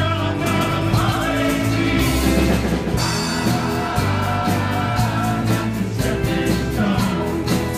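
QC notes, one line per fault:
0.54–2.98 s, doubled audio track: a second full-band copy trails the original by roughly 150 ms at about 5 dB down, dry with no decay, and it cuts in and out abruptly. Likely a slower second capture path or two misaligned copies in an edit.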